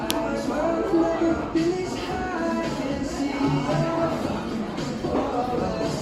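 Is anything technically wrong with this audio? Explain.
Yes. From 3.64 s to the end, the sound turns rough and muffled, with the top end dulled away for about 2.18 s at its worst. This is a call bitrate drop: the encoder was starved of bits, which fits a fall from around 128 to 18 kbps, forcing coarser coding that strips high frequencies.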